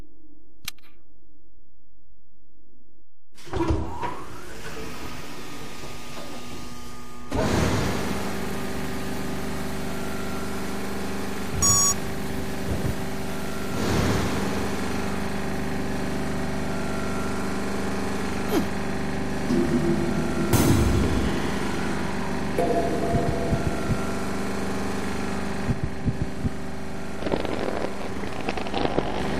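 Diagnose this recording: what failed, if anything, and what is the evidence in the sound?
A DC offset runs through the entire recording, pointing to the analogue front end or converter passing a constant voltage into the samples. The waveform sits shifted off zero by about -29 dBFS. It is inaudible itself but eats headroom and leaves steady energy at 0 Hz.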